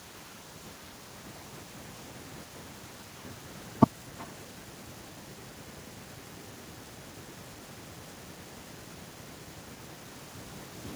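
From start to finish, the speech carries echo with no canceller. A loudspeaker at the far end is picked up by its microphone, and nothing removes it. Each phrase returns after roughly 400 ms. The copy sits about 17 dB down, and thinner.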